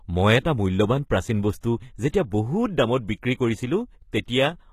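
Throughout the speech, the treble sounds synthetic and plainly damaged, which points most likely to HE-AAC compression at a low bitrate, around 20 kbps. Only the lower spectrum is coded, and the top is rebuilt by copying lower bands upward, so harmonics misalign across the crossover. A spectrogram shows nothing above 14.9 kHz and a patchy, repeated-looking upper band.

Pre-echo follows, at 1.61 s right after "এটা মূল্যৱান প্ৰাচীন", from 2.09 to 2.14 s, and at 4.12 s, spreading about 19, 51 and 11 ms. Each time, coding noise sized for an attack leaks into the quiet moment before it, so a brief hiss precedes a softened onset. The waveform shows a low fuzzy ramp before each transient, and a spectrogram shows a faint vertical smear just ahead of it.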